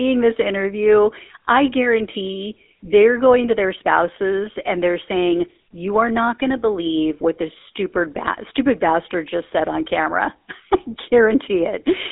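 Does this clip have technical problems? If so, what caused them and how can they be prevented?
Yes. The whole clip has GSM full-rate codec damage: a buzzy, gravelly roughness from the coarse pulse-driven excitation. It sits in a narrow 250 Hz to 3.6 kHz band with nothing above 3.8 kHz, which fits a 13 kbps phone link. To prevent it, record locally or route the call over a wideband codec instead of a legacy GSM leg.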